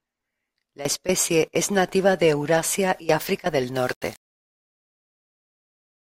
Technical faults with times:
3.75-6.01 low bit depth without dither

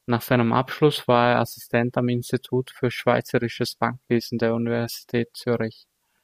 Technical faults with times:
none

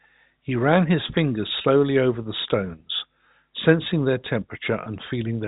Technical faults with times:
1.62-1.64 packet loss with pitch repetition
4.84-4.86 packet loss with pitch repetition

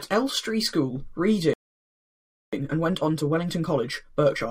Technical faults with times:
1.53-2.53 playback stall
2.53-4.51 time-compressed catch-up

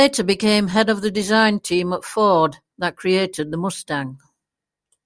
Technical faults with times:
none

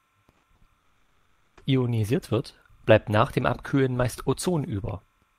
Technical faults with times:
0.00-5.39 timecode bleed
0.31-0.64 burst of packet loss
0.79-1.60 long network dropout

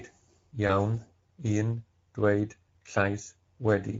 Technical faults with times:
0.00-3.99 Speex codec
0.67-0.72 VoIP packet loss concealed by the speech codec

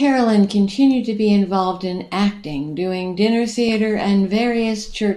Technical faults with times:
3.69-3.73 DAB burbling

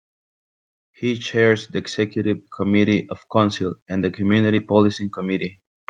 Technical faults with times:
1.00-4.25 automatic gain rising

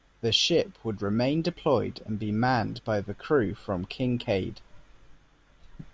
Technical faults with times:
none

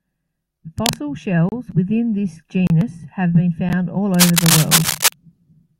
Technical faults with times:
0.78-0.97 cable scratch noise
1.49-1.52 block of digital silence
2.67-2.70 block of digital silence
3.69 block of digital silence
4.14-5.13 cable scratch noise
4.91 block of digital silence

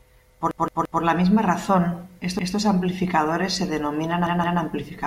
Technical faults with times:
0.51-1.02 repeated buffer
2.39-2.56 repeated buffer
4.27-4.61 repeated buffer

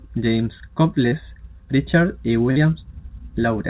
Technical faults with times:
1.08-1.14 short concealed packet loss
2.51-2.59 short concealed packet loss

